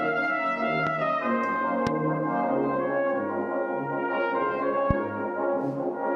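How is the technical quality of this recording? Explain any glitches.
Three loud pops mar the recording, at 0.87–0.89 s, 1.87–1.89 s and 4.91–4.93 s. Each is a single sharp thump, roughly 15 dB above the sound. It is likely a voltage pulse from a plug, switch or static. The sound continues unbroken beneath each pop, unlike a dropout or gap.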